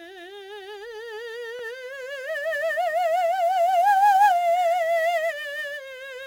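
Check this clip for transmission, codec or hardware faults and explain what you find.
The music carries a hardware fault across its whole length: sample clock jitter.

Throughout the clip, the converter's clock wanders by something like 7 microseconds, so each sample is captured slightly off its proper instant. That timing error turns into amplitude error wherever the waveform is changing fast, giving a gritty hiss that sits roughly 25 dB below the music, swelling on loud, bright passages and falling away in quiet ones. On a spectrogram this shows as a broadband noise haze that brightens with treble energy and tracks the music's level. The waveform looks normal to the eye.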